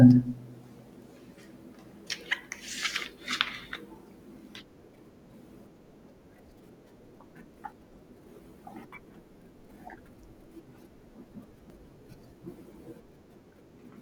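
At 7.72 s and again at 11.70 s the speech skips forward abruptly, with a tiny sliver, around 20 ms, missing and the two sides butted together without any gap. The four-second spacing points to audio missing between chunks, likely a recorder handing over from one 4-second block to the next. On a waveform each joint shows as a sudden step in the wave, and a spectrogram shows a thin vertical line where the patterns jump discontinuously.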